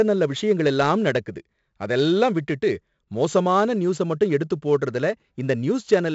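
Throughout, the speech carries a gritty hiss that swells with every loud syllable, roughened attacks, and nothing above 7.7 kHz. This is heavy 4-bit ADPCM compression: each sample is a coarse step from a prediction, and the adapting step lags sudden onsets.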